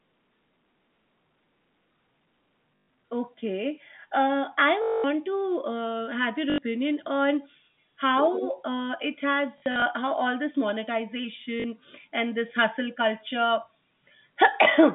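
Packet loss with last packet repeated occurs at 2.76–2.88, 4.82–5.04, 6.5–6.58, 9.58–9.82 and 11.6–11.64 s. Missing audio was replaced by replaying the previous packet. Longer runs buzz near 50 Hz, which fits 20 ms packets. The 9.58 s loss is scattered.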